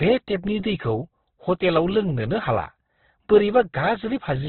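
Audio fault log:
throughout, Opus compression: the speech is band-limited and grainy, with no energy above 4.2 kHz and heavy codec damage. This is likely Opus running in its music (CELT) mode at a very low rate, which fits about 12 kbps. The encoder keeps each band's energy but fills it with folded or noise content, so voiced sounds turn rough and hissy rather than swirling. On a spectrogram there is a flat ceiling at 4.2 kHz, and harmonics below it are smeared into speckled noise.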